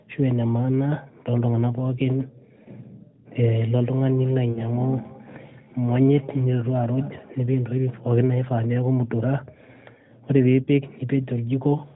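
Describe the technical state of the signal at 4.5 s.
A second device in the room is replaying the call and this microphone picks it up again, so feedback echo between two devices runs from 3.73 to 7.43 s. Each sound returns roughly a fifth of a second later, thinner and ringing, peaking about 23 dB below the speech.

Inside that span, from 4.52 to 4.63 s, lost AMR speech frames leave about 40 ms of corrupted audio, which fits two dropped 20 ms frames. The decoder fills the gap by reusing the last good settings at falling gain, heard as a brief dip or warble.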